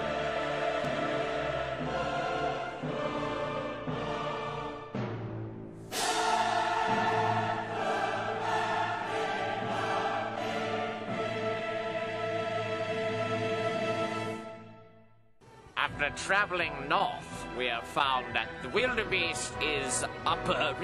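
No technical faults can be heard anywhere in the recording. Nothing in it drops out, clicks or distorts.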